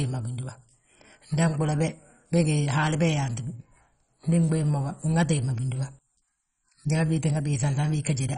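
Throughout, the speech sounds dull and gurgling, with nothing above 10.4 kHz. Bit-starved upper bands drop out. This is likely MP2 compression, fitting a bitrate near 32 kbps.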